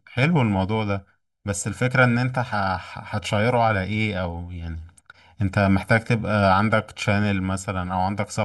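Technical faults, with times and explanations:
Throughout, channel delay (comb filtering): one channel of the speech arrives roughly 1.5 ms late, and summing to mono cancels shared content at evenly spaced frequencies, starting around 400 Hz. The fixed notches make the sound hollow and phasey.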